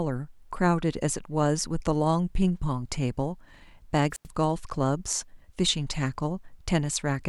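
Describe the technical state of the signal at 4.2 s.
At 4.2 s the speech is interrupted by a wireless microphone squelch dropout running from 4.11 to 4.28 s: a brief surge of hiss or static, then a hole of near silence lasting about 88 ms, before the voice comes back. The microphone's analogue FM radio link faded so badly that the receiver's squelch circuit muted its output rather than pass the noisy signal, then reopened once reception recovered.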